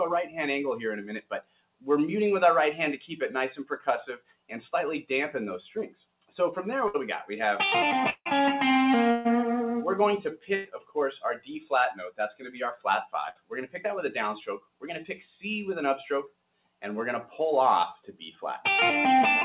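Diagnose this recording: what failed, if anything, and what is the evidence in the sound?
The stage is call processing. A speech-oriented noise suppressor stays engaged across the whole clip and treats sustained tones, ambience and decays as noise. The result is a continuous gain swing of about 5 dB: onsets pass at near full level, while held material and tails are pulled down. This produces an audible pumping and thinning that sits on top of the G.711 path's band limit, with nothing above 4 kHz.

The same suppressor makes deeper, localized cuts at 1.21–1.86 s, 3.63–4.51 s, 5.89–6.32 s, 10.37–13.79 s, 14.59–14.83 s, 16.28–16.83 s and 17.97–18.40 s. At its deepest, each sound cut by the noise suppressor drops by about 18 dB, and the last one by about 12 dB. Sustained and decaying components sink or have their tails truncated, while transients survive. This shows the gain estimator classifying steady content as noise rather than any level fault upstream.

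The network stage shows bursts of packet loss at 6.88 s, 9.11 s, 10.55 s and 13.29 s, with roughly 60, 140, 100 and 60 ms of audio missing. At each point the receiver's concealment extends the last sound, which becomes a buzz or hiss that decays. Playback then resumes further along, with the intervening material gone. The gap lengths fit a few consecutive packets discarded or arriving past the jitter buffer deadline.

At 8.10–8.27 s, about 160 ms of audio is missing. Concealment fades the last sound out and leaves roughly 50 ms of silence before the audio returns at a later point, with the lost segment never played. The likely cause is a long network dropout, where nothing arrived for the whole stretch, rather than a short packet burst. The silent tail after the fade is what separates this event from the shorter losses.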